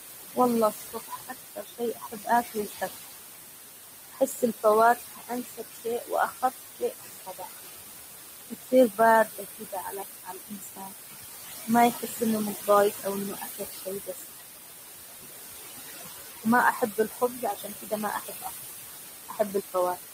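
Noise suppressor artifacts run throughout: the room noise, only about 7 dB under the speech, is pushed down about 18 dB between phrases, so the background pumps. Speech cut by the noise suppressor occurs at 0.71–3.08, 4.1–7.49, 8.5–10.93, 11.67–12.22, 12.55–14.3, 16.43–18.5 and 19.28 s to the end. There the suppressor mistakes quiet speech for noise and pulls it down by about 18 to 22 dB, or about 12 dB at 11.67 s. Over about 0.3 to 1.5 s in most of these spans, endings and soft consonants sound swallowed.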